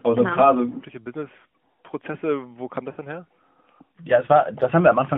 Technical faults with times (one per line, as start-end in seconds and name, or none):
0.34-0.39 lost AMR speech frames
2.92-2.99 lost AMR speech frames